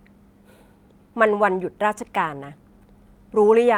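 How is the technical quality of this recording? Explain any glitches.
No glitches or faults detected.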